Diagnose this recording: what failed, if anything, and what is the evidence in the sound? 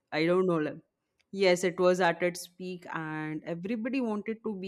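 Nothing failed in this recording, and the sound gives no evidence of a fault at any stage.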